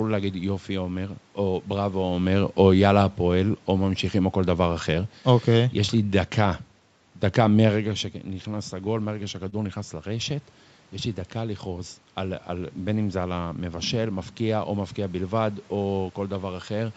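From 2.13 to 7.91 s, automatic gain falling: the gain control judged the input too loud or its background noise too strong and eased its gain down by about 4 dB over almost six seconds. The speech starts loud, then slowly sinks, with the room noise beneath it dropping along with it.

At 9.49 to 9.54 s comes a short stall from a late packet: a packet missed its slot, the jitter buffer ran dry, and the receiver stretched the last sound by 29 ms before resuming at the same point. Nothing is lost, but that instant of speech hangs slightly too long.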